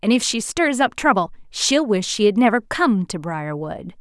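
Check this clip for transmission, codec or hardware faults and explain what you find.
Nothing found: the speech runs continuous and steady throughout, with no audible fault of any kind.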